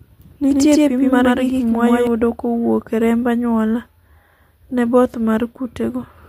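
From 0.53 s to 2.07 s the speech is heard twice: a doubled audio track, with a second, equally loud full-band copy trailing by about a tenth of a second. It likely comes from a second capture path or misaligned edit. Unlike echo or reverb, the copy has no decay or room colour and switches in and out abruptly.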